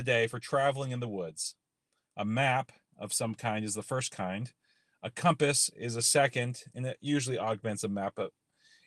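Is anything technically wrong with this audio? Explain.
No, nothing is technically wrong with this audio.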